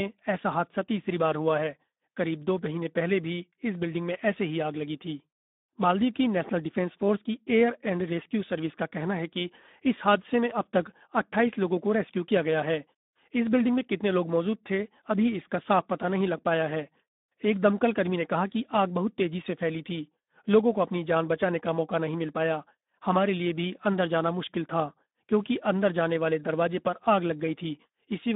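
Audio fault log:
throughout: Speex codec, speech held to 200 Hz–3.7 kHz with nothing above 3.8 kHz, plus a hoarse, noisy CELP texture that fits an 11 kbps setting, unlike plain band-limiting.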